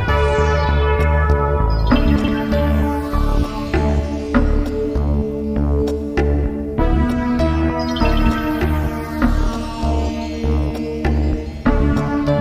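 Chunks out of order occur from 2.16 to 2.28 s. A 40 ms chunk plays two chunks late, after the two that should follow it. Nothing is missing, but the sequence is scrambled, leaving three hard joins heard as a jumbled stutter.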